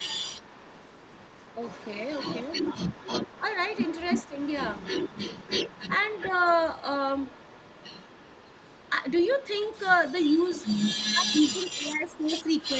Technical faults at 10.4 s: echo leak

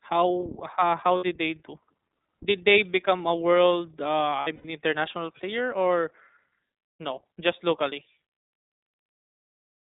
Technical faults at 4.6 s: iLBC codec; lost iLBC frames

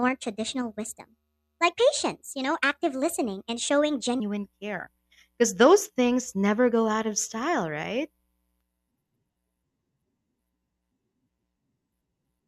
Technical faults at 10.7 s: none

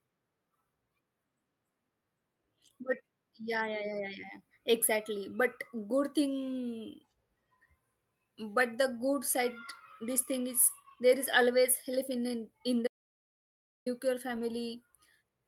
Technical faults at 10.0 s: none

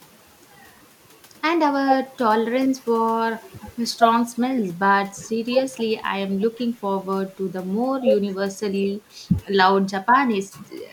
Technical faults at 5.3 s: none

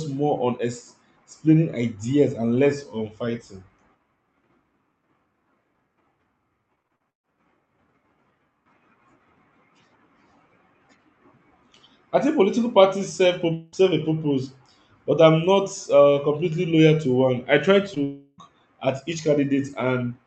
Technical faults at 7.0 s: repeated packet loss (robotic sound)

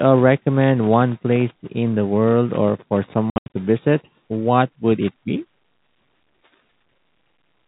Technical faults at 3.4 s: packet loss filled with silence

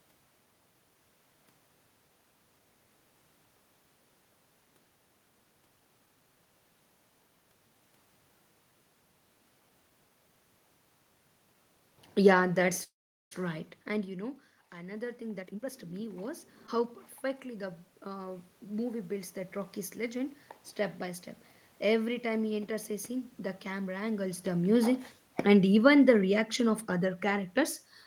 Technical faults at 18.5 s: automatic gain rising

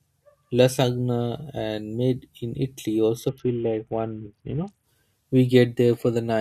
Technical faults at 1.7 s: none

